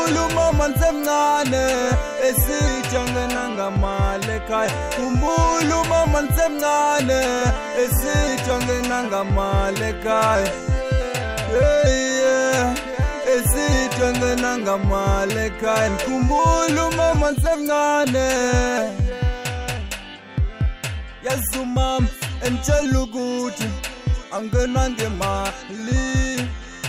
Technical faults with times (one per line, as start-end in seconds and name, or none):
none